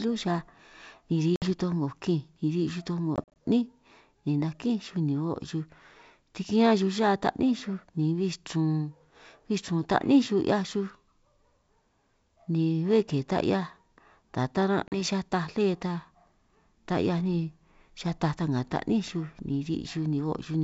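At 1.36 s, 3.16 s and 14.88 s the speech shows packet loss on an ADPCM call. About 60 ms drops out at 1.36 to 1.47 s, 100 ms is scattered over 200 ms from 3.16 s in gaps of up to 40 ms, and 40 ms is lost at 14.88 to 15.01 s. Each gap is a hard-edged silence. Afterwards the decoder's predictor and step size no longer match the sender's, so the sound resumes with brief, slight distortion before settling.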